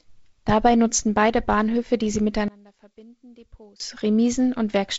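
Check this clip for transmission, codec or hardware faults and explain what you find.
One fault is audible. From 2.48 s to 3.80 s, right after "die sie", the speech drops by about 26 dB to a faint residue, then returns at full level. This is most likely one channel inverted: with one stereo channel's polarity reversed, the centred speech common to both channels cancels when they are summed to mono, leaving only their small differences. The wideband telephone coding underneath, with nothing above 7.7 kHz and a light upper-band hiss, fits G.722 at its 48 kbit/s mode.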